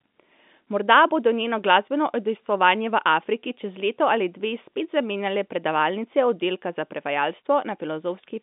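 No technical faults can be heard in this speech clip.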